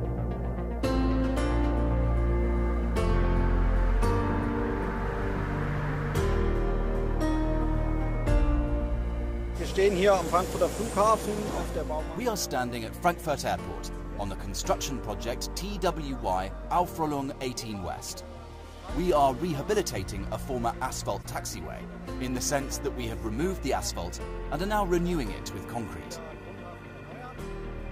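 A brief chirp-like burst of misplaced energy cuts in from 21.22 to 21.27 s, peaking around -30 dBFS. This is a corrupt frame decoded: flipped bits in a couple of compressed frames went uncaught, so the decoder rebuilt them with wrong gains and misread codes, scattering energy into the wrong frequencies.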